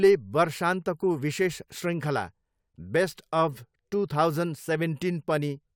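Speech recording with no audible technical faults.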